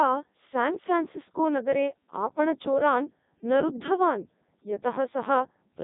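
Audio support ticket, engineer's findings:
Robotic, buzzy speech throughout, whole clip. Nothing audible above 3.8 kHz. Component: Codec 2 vocoder, heavy damage. Decoder rebuilds the voice from sine waves driven by pitch, voicing, energy and spectral envelope only; original waveform discarded, hence the synthetic buzz. Sound is consistent with the 3.2 kbit/s mode.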